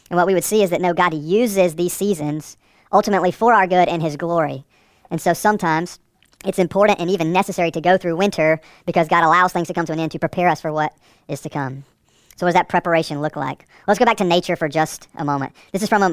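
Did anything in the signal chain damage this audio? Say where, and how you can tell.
Yes, at playback: a wrong sample rate throughout. Speech runs about 1.45 times too fast and about 6.45 semitones high, fitting roughly 22 kHz material clocked out near 32 kHz. Pitch and tempo shift by one ratio, unlike time-stretching or pitch-shifting, which alter only one.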